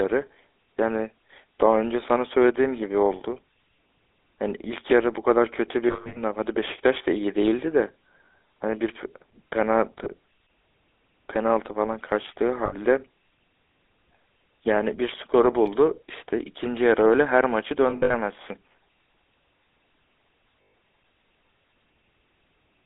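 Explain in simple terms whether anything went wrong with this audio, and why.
The speech was sent through the GSM full-rate codec, an old mobile-phone coder that keeps only the 300 to 3700 Hz band, so voices sound muffled, buzzy and gravelly throughout.

Lost GSM frames also occur at 5.88–6.21 s, 10.04–10.14 s, 12.66–12.74 s, 17.90–18.17 s and 20.62–20.74 s. Missing pieces were patched by repeating the last good sound, so it briefly smears into a rough metallic ring.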